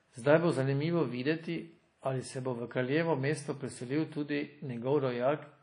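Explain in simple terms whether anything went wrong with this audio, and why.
The speech was likely squeezed by WMA compression throughout, cutting everything above 10.1 kHz, so it sounds dull, washy and ringing, with hiss that rises and falls.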